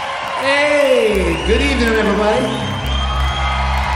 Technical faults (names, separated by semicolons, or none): word clock ticks